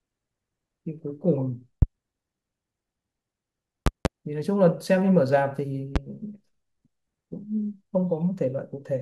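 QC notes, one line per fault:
1.82–1.85 s, loud pop. A single sharp pop jumps well above the speech, peaking roughly 20 dB over it. A voltage spike, likely from a plug, switch or static discharge, was added to the signal.
3.86–4.08 s, loud pop. Two pops in quick succession, again about 20 dB above the speech. The speech carries on underneath.
5.96–5.99 s, loud pop. One shorter, softer pop, about 15 dB above the speech.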